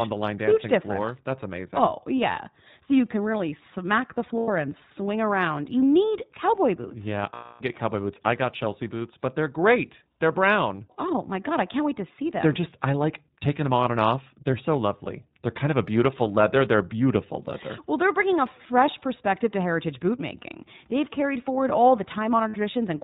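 iLBC codec damage runs through the whole clip. Everything above 4 kHz is cut away, and the speech has a rough, slightly synthetic edge. This fits iLBC at 15.2 kbps with 20 ms frames, each coded on its own.

Lost iLBC frames occur at 4.38–4.50 s after "can really smack the" (100 ms), at 7.34–7.64 s before "get cowboy boots I" (260 ms), and at 22.48–22.56 s after "carried forward all the" (60 ms). The decoder repeats the last pitch cycle with noise, giving a held, buzzy vowel that recovers almost at once.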